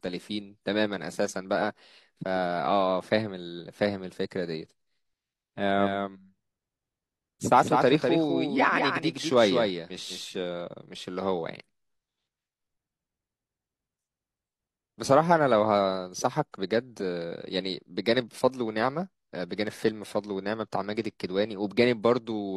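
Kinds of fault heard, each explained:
Doubled audio track: from 5.78 to 10.24 s, a copy about 5 dB quieter trails the speech by roughly 200 ms, likely from a second capture path.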